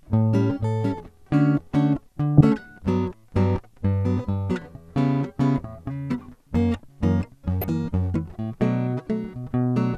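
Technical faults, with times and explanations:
2.37–2.45 s and 7.61–7.69 s, DAB burbling: two short bursts of burbling over the music, each lasting under a tenth of a second. Weak reception lets a low level of bit errors slip past the error correction into the MP2 audio data. Corrupted samples then put short blips of noise in single sub-bands, and corrupted scale factors, where they get through, make sub-bands jump in level for up to a frame, and these isolated blips and band-level jumps produce the burbling.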